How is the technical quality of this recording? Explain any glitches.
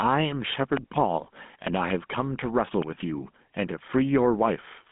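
The technical quality is poor: three separate faults are audible, two running through the whole recording and one brief glitch.

Gain pumping runs throughout, with a level swing of roughly 5 dB, so loud and quiet passages sit unnaturally close together and the speech sounds squashed. The cause is likely input gain set far too high for the microphone, with a fast limiter or compressor clamping down on each peak and releasing in the gaps.

The whole recording also carries GSM full-rate codec damage, and it is plainly audible. The line band runs from about 150 Hz to 3.5 kHz, with nothing above 3.8 kHz. The speech has a buzzy, gravelly roughness, which comes from the codec modelling the vocal tract and exciting it with sparse, regularly spaced pulses. The character fits the 13 kbps GSM full-rate codec. Ordinary band-limited telephone audio would sound muffled but smooth. The grainy buzz is what marks this as GSM.

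From 1.67 s to 1.92 s there is a loud pop, heard as two sharp pops in quick succession, roughly 15 dB above the speech. The speech continues underneath them uninterrupted. This is likely a voltage spike from a plug, switch, static discharge or driver glitch entering the signal chain, with the following circuits shaping it into a short thump. Because nothing drops out, it is an added transient rather than a dropout or buffer glitch.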